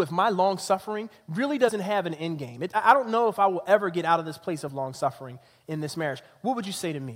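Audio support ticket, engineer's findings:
Short digital blip breaking the speech at 1.67–1.69 s, then a second, briefer squawk at 4.67 s. Fault: damaged data in a compressed stream. Probable component: transport or storage of the encoded file. Mechanism: corrupted bytes in the bitstream make the decoder misread those frames and lose frame sync. It emits garbage output until it finds the next valid frame header, which produces the glitch at each point.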